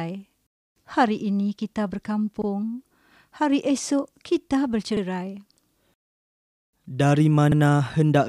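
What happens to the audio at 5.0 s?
Just after "esok kita", from 4.97 to 5.02 s, there is an overlapping-chunks fault. The next chunk of audio starts before the previous one has finished, so a 50 ms slice of the speech plays twice. This fits chunks about 2.5 s long meeting at this point. It is heard as a brief stutter with a click at the seam. On a waveform, the same 50 ms shape appears twice in a row with a jump where they meet. A spectrogram shows a thin vertical line there and the same harmonic pattern repeated.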